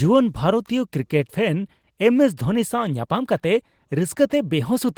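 No technical faults can be heard anywhere in the speech: the signal runs continuously, with steady level and nothing in its path disturbing the sound.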